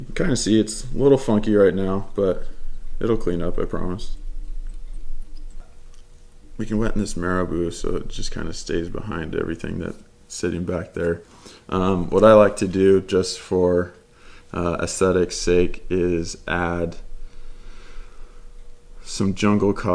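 No technical faults are audible.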